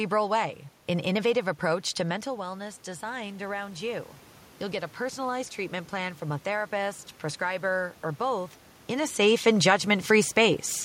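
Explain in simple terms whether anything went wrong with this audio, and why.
Around 2 s the voice drops, likely because the talker moved back from the microphone. From 2.06 to 7.06 s, automatic gain rising slowly turns the level back up. The voice and the room noise swell together over those five seconds.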